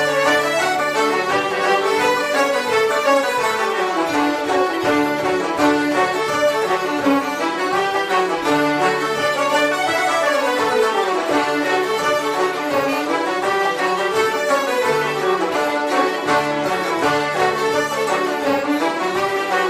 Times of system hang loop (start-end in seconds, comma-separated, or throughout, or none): none